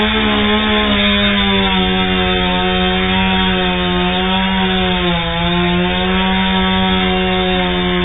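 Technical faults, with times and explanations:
Throughout, AAC compression: the audio was most likely squeezed through AAC-LC at a very low bitrate, with damage heavy enough to point to something around 8 kbps. Starved of bits, the encoder discards everything above about 3.8 kHz and quantises the remaining bands coarsely against its hearing model. The sound comes out dull and smeared, with a warbling, fizzy texture wherever energy is sustained.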